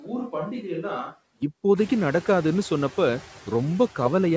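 It's a short speech clip, and right from the start up to 1.42 s it sounds like a switch to a distant microphone: the voice is hollow and roomy, thinner in the bass, around 10 dB quieter, with room noise only about 20 dB down. That most likely means the close mic dropped out and a farther one was picked up until about 1.42 s. All the way through there are noise suppressor artifacts too, with the background pulled down by about 7 dB, so the leftover noise ducks in the gaps and comes back under the voice. The room noise steps up by about 18 dB around 2 s. The band stops at 8 kHz, which fits a G.722 call codec.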